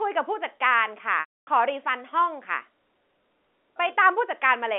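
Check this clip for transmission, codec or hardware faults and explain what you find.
One transmission fault: packet loss with pitch repetition, from 1.2 to 1.47 s. About 270 ms of audio, consistent with nine 30 ms packets, went missing on the G.711 telephone-band line. The receiver looped the last pitch period, so a brief buzzy hold fades into silence before speech cross-fades back. That held, periodic buzz at the start marks concealment rather than a plain dropout or clipped gap.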